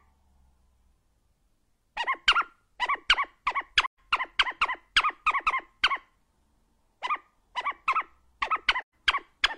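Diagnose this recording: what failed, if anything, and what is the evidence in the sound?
Codec stage: AAC frame loss with muting. Soft-edged gaps at 3.85–3.98 s and 8.81–8.93 s. Lost frames were zeroed; overlapping windows fade each edge.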